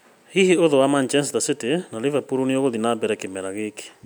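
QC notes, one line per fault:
No technical fault is audible anywhere in the signal.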